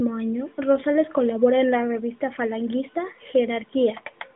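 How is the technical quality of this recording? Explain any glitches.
No glitches turn up in this speech recording: it carries the narrow telephone band of roughly 200 Hz to 3.6 kHz with nothing above about 3.8 kHz, as a narrowband mobile link at a rate near 12.2 kbps would deliver, and the signal stays steady throughout.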